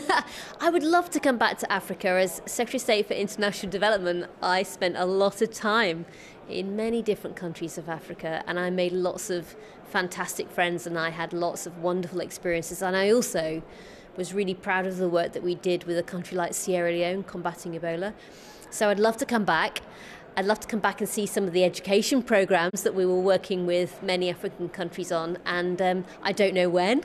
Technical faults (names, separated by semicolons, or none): digital broadcast dropout